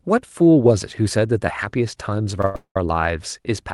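At 2.41 s and again from 2.45 to 2.56 s, short stalls from late packets stretch the last sound by about 20 ms and then 92 ms, showing as smeared, repeated spectrogram bands before normal content resumes. From 2.56 to 2.77 s, a call audio freeze holds things up for 200 ms. A fading buzz decays to about 90 ms of flat silence in the waveform, likely caused by packets delayed in transit.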